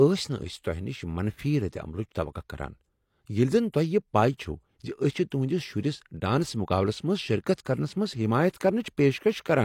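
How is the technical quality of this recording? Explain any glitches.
One codec fault stands out in this speech recording. At 5.30 s there is pre-echo: a short hiss of about 15 ms arrives just before a sharp onset, because quantisation noise spread across the coding block fills the silence ahead of the attack. A spectrogram shows a thin broadband smear preceding the transient, and the waveform shows low-level noise where the quiet gap should be flat.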